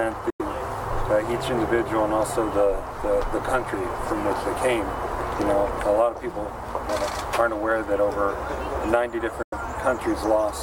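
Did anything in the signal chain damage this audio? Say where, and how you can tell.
Yes. The sound cuts to silence from 0.30 to 0.42 s and again from 9.42 to 9.54 s, then resumes as if it had played on. That points to playback: likely a Bluetooth dropout, where packets arriving too late were discarded, losing about 93 ms each time.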